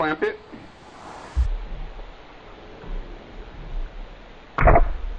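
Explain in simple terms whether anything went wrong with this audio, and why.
From 1.46 s the sound plays at half speed and an octave lower together. That is a wrong sample rate, not plain slowing, which keeps pitch.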